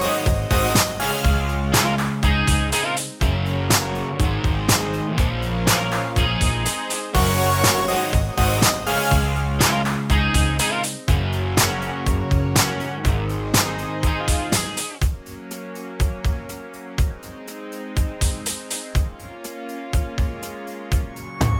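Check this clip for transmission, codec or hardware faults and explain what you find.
Nothing here points to a transmission, codec or hardware problem; it all sounds just as it should.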